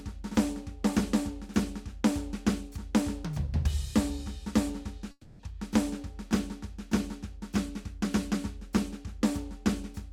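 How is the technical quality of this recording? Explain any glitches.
The recording has one glitch in the music, a long network dropout from about 5.11 to 5.42 s. The stream likely stopped delivering audio for roughly 0.3 s, and the receiver tried to cover the gap by extending the last sound it had for about 280 ms before giving up. You hear the music smear into a fading buzz or hiss, then about 20 ms of silence, and playback resumes with roughly 280 ms of the passage missing.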